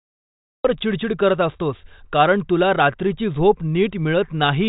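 A speech recording that opens on dead digital silence until 0.65 s, then jumps straight into the middle of a sound with no attack: a cut-off start, where capture began late. The band stops near 3.8 kHz, which fits the telephone bandwidth of G.726 ADPCM, and its faint or absent hiss points to the 40 kbit/s rate.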